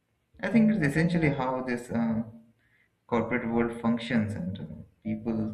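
Throughout the speech, overlap-add ripple: badly summed frame overlaps make the level pulse by about 6 dB near 400 Hz, a metallic buzz with extra tones around each note rather than steady hum.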